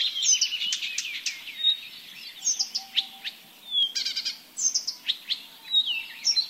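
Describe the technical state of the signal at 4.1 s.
At 4.1 s the sound passes through intact, with no dropout, distortion or other fault.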